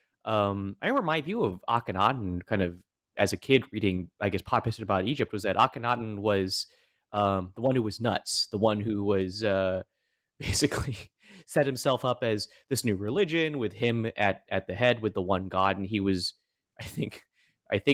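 No technical faults can be heard anywhere in this speech clip.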